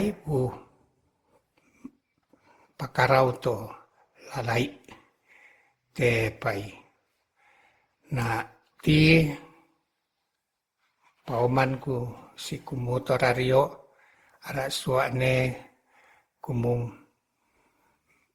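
From start to finish, the speech carries a swirling, watery smear, with consonant attacks blurred and the tone hollowed out. Content still reaches up to 20.2 kHz, so the damage is not a bandwidth cut. The sound points to Opus at around 64 kbit/s, and the likely cause is generation loss: roughly fifteen successive encode–decode passes, each requantising on a shifted frame grid so the noise compounds.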